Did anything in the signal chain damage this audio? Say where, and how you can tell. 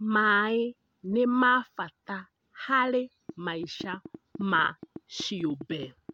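Yes. From 3.29 s to 6.10 s a train of clicks rides over the speech at about 7 per second, unevenly spaced, roughly twenty in all, peaking about 5 dB above the signal. The stage is most likely the analogue wiring, picking up interference from nearby equipment or from a faulty connection or power supply. On a waveform these show as narrow, similar-shaped spikes standing clear of the speech; a spectrogram shows thin vertical broadband lines, visible in pauses too.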